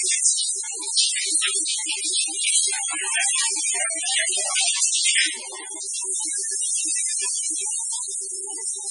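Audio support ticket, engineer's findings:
MP3 compression, throughout: nothing above 10.5 kHz, heavy watery swirl and smeared attacks. Likely a very low-bitrate encode, around 16 kbps, zeroing weak frequency lines frame to frame.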